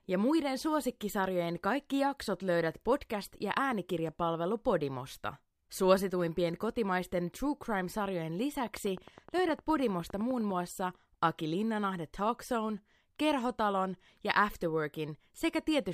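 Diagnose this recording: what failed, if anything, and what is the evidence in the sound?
A steady train of clicks ticks over the speech from 8.57 s to 10.52 s, about 9.8 per second at an even spacing, around twenty in all. The clicks are alike in shape and stand out a few decibels above the speech, audible through the pauses as well. That regular rate of identical pulses points to the analogue wiring or the interface, likely periodic interference from nearby equipment or a faulty connection or power supply.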